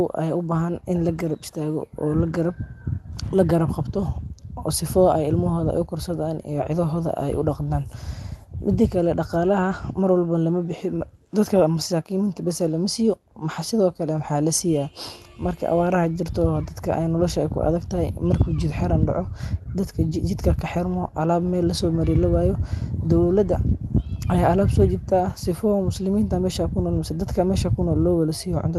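At 20.09 to 20.13 s, just after "jid xiram daaco dadka" and before "kaxirmo aalab meel lasoomari", there is short concealed packet loss: about 20 ms of the call arrived too late for the decoder, and the receiver covered the hole by extending the preceding sound, following its pitch if voiced or substituting shaped noise if not, before crossfading into the real signal. It is heard as a brief smear or wobble in the speech, on a call path whose roughly 12 kHz top end fits Opus coding.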